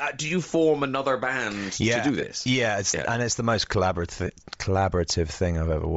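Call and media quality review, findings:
Breathy, grainy edge on the speech throughout. Upper band thin and noise-filled. Likely Bluetooth LC3 compression at a low rate, around 32 kbps with 7.5 ms frames: the codec zeroes upper spectrum and fills it with noise.

Lost LE Audio frames at 2.21–2.23 s, after "band yeah to do", and at 4.27–4.30 s, after "and it's the most". Brief noisy smear, about 15 ms and 22.5 ms. Fits two and three lost frames, concealed by repeating the last spectrum with random signs.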